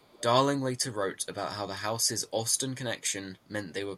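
From 0 to 0.23 s there is an echo leak: a faint, delayed copy of the speech trails the direct signal by 344 ms, sitting roughly 25 dB below it. The cause is likely a far-end loudspeaker whose echo canceller failed to fully subtract what its microphone picked up, so the residue was transmitted back. It sounds like a quiet ghost of the speech lagging about a third of a second behind.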